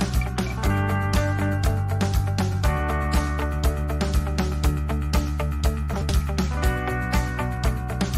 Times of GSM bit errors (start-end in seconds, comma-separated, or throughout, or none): none